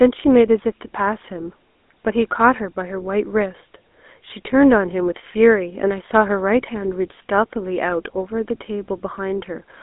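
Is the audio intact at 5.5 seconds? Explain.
No, it sounds buzzy and gravelly with nothing above about 3.8 kHz. This is GSM full-rate codec damage, present throughout: the vocal tract is modelled and driven by sparse regular pulses.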